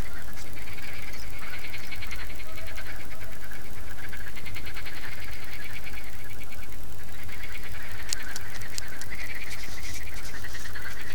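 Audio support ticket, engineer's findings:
Doubled audio track, whole clip: full-band second copy of the audio trailing by roughly 0.7 s, about 5 dB down, dry, no decay or room colour. Likely cause: second capture via a slower path or a misaligned duplicate in the edit, summed with the original.

Audible as a clean, flat repeat of each event rather than reverb. Check the routing and monitoring paths for a duplicate feed, then check the timeline for stacked clips.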